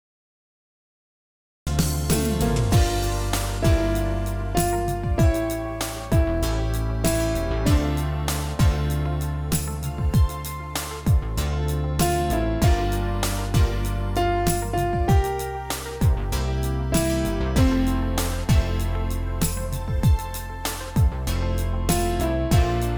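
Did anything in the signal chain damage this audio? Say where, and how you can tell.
Yes. The clip has a cut-off start: from 0 to 1.67 s there is pure digital silence, and then the sound appears abruptly at 1.67 s, already mid-event with no attack or fade-in. On the waveform this is a flat line that jumps straight to the signal. A spectrogram shows an empty region ending in a hard vertical edge. The fault lies at the capture or recording-start stage: the stream was joined late, so the beginning of the sound was never recorded.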